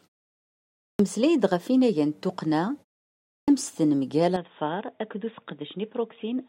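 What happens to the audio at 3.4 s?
After a 0.65 s pause the output device had gone idle and was slow to wake, producing a clipped start: about 69 ms from 3.41 to 3.48 s is swallowed, so speech bursts in abruptly.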